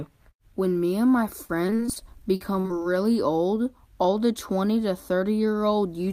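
From 1.45 to 2.84 s, repeated packet loss (robotic sound) breaks the audio into about a dozen short holes, each up to 43 ms. Each is patched by extending the prior sound, giving a choppy texture with pieces missing.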